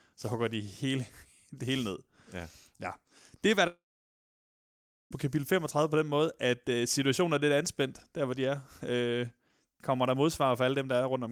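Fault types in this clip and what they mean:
long network dropout: At 3.67 s the speech smears into a short buzz that fades away. Silence then holds for about 1.3 s. Speech returns at 5.14 s, with about 1.4 s of it gone. Packets that never arrived are the likely cause.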